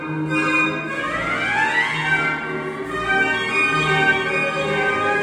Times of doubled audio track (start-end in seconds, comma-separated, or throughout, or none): 3.49-5.22